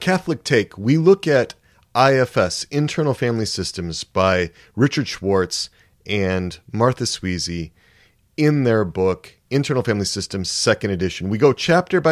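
There are no technical faults to describe anywhere in this speech recording.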